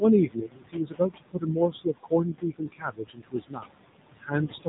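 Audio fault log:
throughout — noise suppressor artifacts: room noise, about 11 dB below the speech, drops by about 20 dB between phrases and returns under them. The spectrogram shows a blotchy, gated background.
throughout — AMR narrowband mobile codec: nothing above 4 kHz survives, and the buzzy, synthetic tone points to a low bitrate near 7.4 kbps. The spectrogram shows a hard ceiling at 4 kHz.
0.26–3.72 s — speech cut by the noise suppressor: parts of the speech are pulled down with the noise, by up to about 21 dB and for about two seconds in all. They sound swallowed, and the waveform shows thinned stretches.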